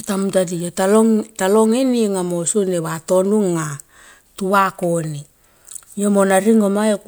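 No technical faults can be heard in this speech recording, so there is nothing to describe in time order.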